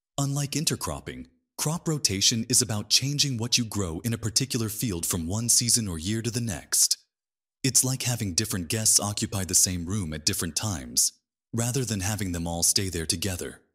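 No technical faults can be heard anywhere in this clip. Nothing in the audio calls for a timestamp or a note on what went wrong.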